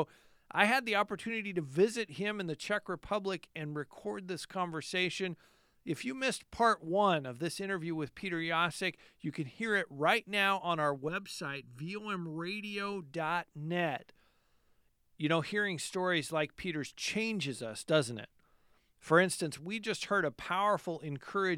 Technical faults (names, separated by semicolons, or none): channel delay (comb filtering)